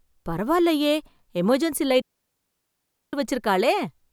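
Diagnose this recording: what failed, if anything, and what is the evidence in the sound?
Digital wireless dropout on the radio link: right after "பரவாயில்லயே எமர்ஜென்சி" the speech drops into a clean, noise-free hole from 2.01 to 3.13 s, as the receiver mutes on lost data.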